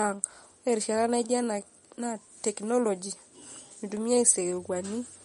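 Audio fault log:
Throughout, MP3 compression: the speech has plainly audible codec damage, with a watery, swirling quality and metallic chirps on s sounds, and consonant attacks smear. Nothing is present above about 10.6 kHz, a hard treble cut-off. The likely cause is a low-bitrate encode, around 40 kbps, where the encoder runs short of bits, drops the top band at a fixed frequency and zeroes weaker spectral lines, which then flicker on and off from frame to frame.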